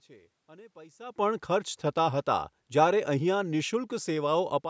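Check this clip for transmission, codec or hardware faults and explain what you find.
No faults can be heard.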